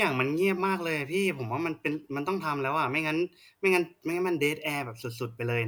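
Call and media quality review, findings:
Nothing stood out on listening to the speech; no findings to log.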